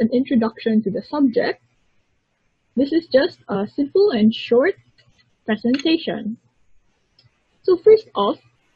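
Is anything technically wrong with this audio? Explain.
Yes. At 5.63 s there is audio missing between chunks: a processor likely working in 3-second blocks dropped a sliver, about 20 ms, while switching blocks, then spliced both sides together with no gap, so the sound jumps abruptly forward at that moment.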